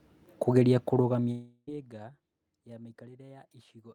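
At 1.31 s the speech breaks off and a buzzy, hissing continuation of the last sound takes its place, fading for about 0.36 s before a brief near-silence of around 20 ms; the speech resumes at 1.69 s with roughly 0.36 s of it simply gone. This is a long network dropout: the likely cause is a run of audio that never reached the receiver, which stretched out the final sound it had until fresh audio arrived.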